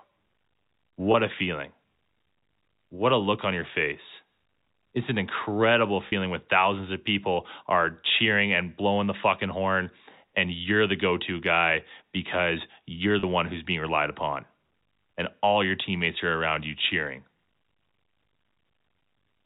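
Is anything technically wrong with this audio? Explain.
Yes. There are three brief dropouts of packet loss with pitch repetition: at 1.12–1.14 s, just before "a feeling"; at 6.08–6.12 s, between "it's an incredible" and "when thousands of people"; and at 13.20–13.23 s, between "to guy because you're" and "one who's being relied". About 20, 40 and 30 ms of audio went missing, which fits 10 ms packets. The receiver filled each gap by looping the last pitch period, so the sound briefly holds with a slight buzz. On a waveform, these spots show identical repeating cycles that decay in amplitude. On a spectrogram, they show flat, frozen harmonic stripes that break the natural pitch movement. The narrowband G.711 telephone coding caps everything at 4 kHz.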